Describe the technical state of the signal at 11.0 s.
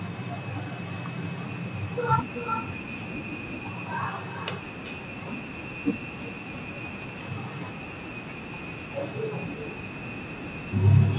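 At 11.0 s, as throughout the clip, there is an echo with no canceller: the far end's loudspeaker feeds its microphone and nothing removes it, so the speech returns about 15 dB quieter, roughly four tenths of a second later, as a thin shadow within narrowband audio cut off at 4 kHz.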